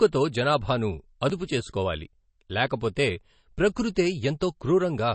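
Throughout the recording, the encoder was likely starved of bits by MP3 compression, and the damage is plainly audible, consistent with a rate around 32 kbps. The treble has been sliced off so that nothing sits above about 8.3 kHz, dulling the speech, while weaker frequency lines drop in and out between frames. That flickering gives the sound a watery, swirling texture, with metallic chirps on s sounds and smeared consonant onsets.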